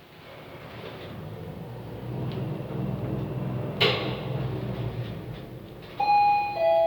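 No technical faults are audible.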